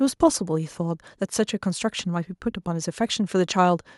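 No technical faults can be heard anywhere in this speech clip.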